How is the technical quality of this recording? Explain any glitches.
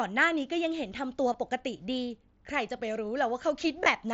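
The recording has two brief glitches, both concealed Bluetooth headset packet loss. The audio travels over a wideband mSBC headset link, audible in its 8 kHz ceiling and light graininess on louder sounds.

At 1.33 s, about 15 ms of audio is missing, which fits two lost packets. At 3.84 to 3.86 s, about 22.5 ms is missing, which fits three. In each case the phone did not receive the headset's packets and filled the hole by repeating the closest-matching piece of recent waveform. The gaps therefore sound like a short buzzy smear with a slight warble at the rejoin, not a silent dropout or a click.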